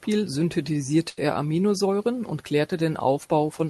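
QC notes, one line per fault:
1.09–1.19 s, burst of packet loss: consecutive packets failed to arrive, so the receiver spent 77 ms stretching the last sound and fading it into a brief buzz or hiss. Speech then resumes with 80 ms of audio skipped.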